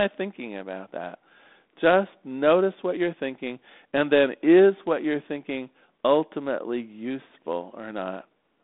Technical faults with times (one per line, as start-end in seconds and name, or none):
none